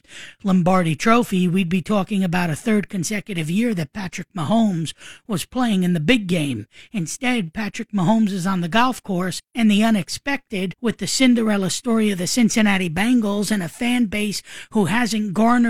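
Speech recording with no technical faults audible anywhere.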